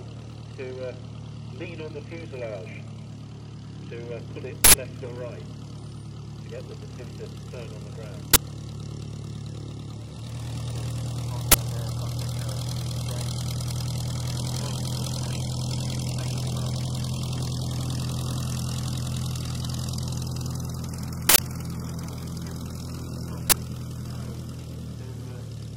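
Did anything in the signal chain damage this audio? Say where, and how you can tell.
Yes. Five short, loud cracks and bursts of digital noise, at 4.64–4.74 s, 8.34–8.36 s, 11.52–11.54 s, 21.29–21.39 s and 23.50–23.52 s, point to an uninitialised buffer in the driver or buffer stage. Blocks played before being filled output stale memory as samples. The 93 ms and 23 ms lengths fit 4096- and 1024-sample blocks.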